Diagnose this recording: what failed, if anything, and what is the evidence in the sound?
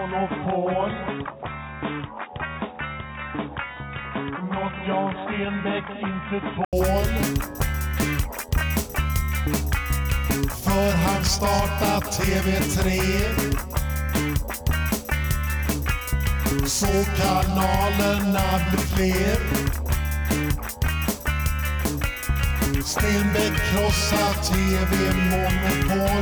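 From 0 to 6.73 s the audio stops near 3.8 kHz, sits quieter with its own background noise, then an 80 ms gap and fuller sound: likely an input switched to a poorer device.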